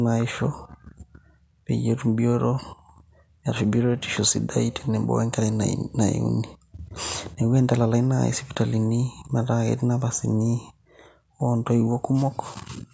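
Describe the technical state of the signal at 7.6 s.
At 7.6 s the speech is intact, with no fault present, only the normal band limit of the call microphone processing, which leaves nothing above 8 kHz and trims the lowest bass.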